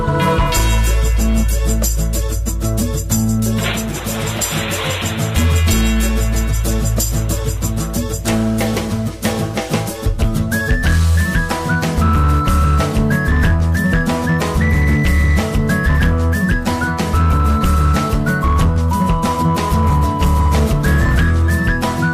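Hard clipping runs through the whole recording. The signal arrives at a stage with about 6 dB more level than it can pass, so the loudest peaks are sliced off flat. Only a small share of the waveform goes over, around one part in twenty. Those flattened tops add harmonics high up the spectrum. The result is crackle on the peaks.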